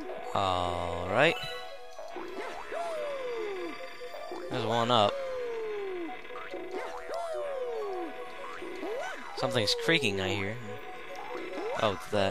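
Nothing goes wrong anywhere in this one, so there's really nothing to flag.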